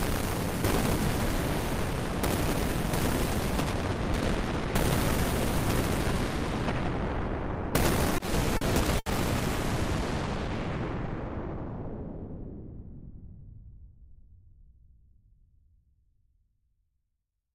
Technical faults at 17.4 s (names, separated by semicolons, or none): none